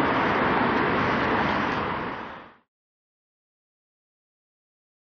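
No technical faults are present: the level eases out in a deliberate smooth fade beginning around 1.5 s and reaching silence by 2.69 s, with no click or hard edge at the end.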